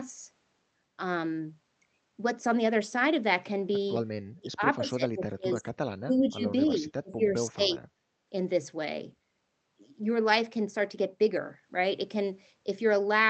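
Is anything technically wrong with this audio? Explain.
Yes. The speech drops out in three places. From 4.29 to 5.71 s it sinks by roughly 35 dB, from 6.03 to 6.44 s by about 15 dB, and from 6.82 to 7.84 s by roughly 30 dB. The likely cause is speech suppressed in double talk: with both ends talking, the echo canceller could not tell this talker from its own loudspeaker echo and attenuated everything. The result is a dipped, broken-up voice for around two seconds in total.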